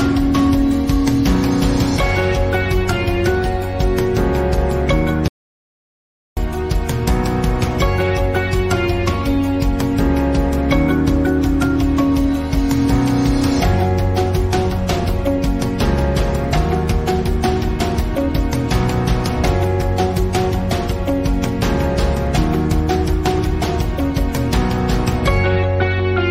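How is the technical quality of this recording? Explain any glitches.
There is one clear glitch, an audio dropout to silence. At 5.28 s the sound stops dead. For about 1.09 s, until 6.37 s, there is nothing at all. No room tone or background hiss remains, only silence. The audio then resumes abruptly. The cause is likely a brief loss of the input signal, from a disconnected device, a failed link or an accidental mute, while recording carried on writing silence. Whatever sounded during that gap is lost.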